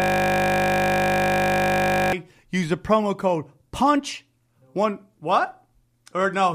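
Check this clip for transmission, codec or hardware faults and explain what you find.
A steady 50 Hz buzz fills the opening of the clip, already under way at the start and lasting until 2.13 s, just before "use the promo code". This is a system hang loop: while the system froze, the audio hardware replayed one 20 ms buffer over a hundred times.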